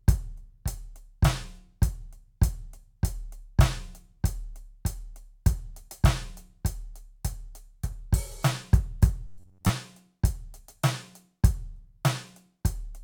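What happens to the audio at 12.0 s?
Nothing goes wrong at 12.0 s; the music plays through that moment intact, with no dropout, click or other fault.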